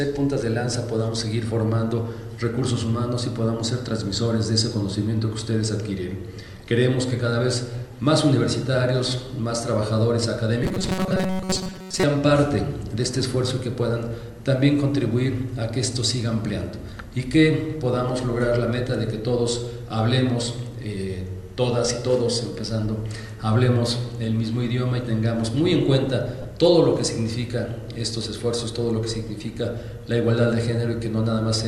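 Robotic sound from repeated short buffers runs from 10.64 to 12.03 s. Across most of that stretch, roughly 70 percent of it, the sound takes on a rigid, metallic buzz locked at 188 Hz while its broad shape still moves underneath. The likely cause is audio arriving too slowly, with the playback side filling each gap by looping the last fragment of about 5.3 ms (one over 188 Hz) while fresh material is skipped.

Lost LE Audio frames appear at 11.73 s, inside that buzzing passage, and again from 26.42 to 26.45 s. The first is a gap of about 7.5 ms, consistent with a single dropped frame. The second, about 22.5 ms, points to three frames in a row. In both, the LC3 decoder covers the hole by replaying the last spectrum with scrambled signs, so tonal content briefly blurs into a noisy smear.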